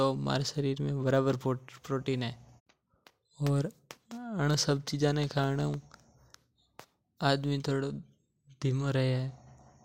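No technical faults can be heard in this recording.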